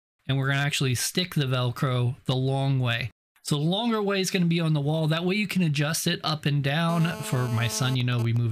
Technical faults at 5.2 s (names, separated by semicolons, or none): none